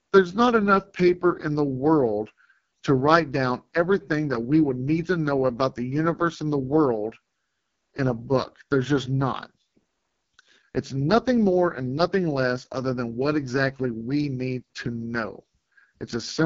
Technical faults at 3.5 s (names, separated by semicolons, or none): AMR wideband (HD Voice) codec